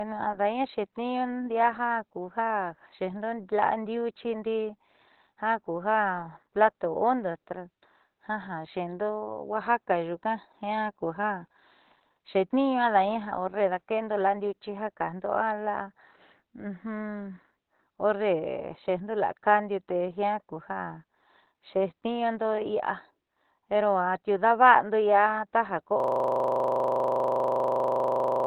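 From the start, the speech has nothing above 4.2 kHz and keeps the artefacts of its first encoding. This is low-bitrate audio saved at a high bitrate. A very low-rate speech codec, likely, was re-encoded as high-rate MP3. The larger file cannot restore the removed detail.

At 26.0 s, a system hang loop begins and lasts to the end. The system froze while the sound hardware kept replaying one 40 ms piece of buffer. It repeats at 25 Hz, giving a steady buzz instead of speech.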